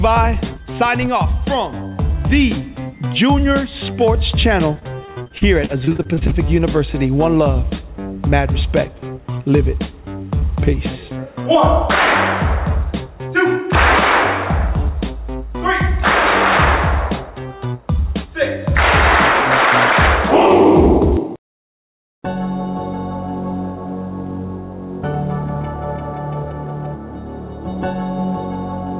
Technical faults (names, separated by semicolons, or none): repeated packet loss (robotic sound)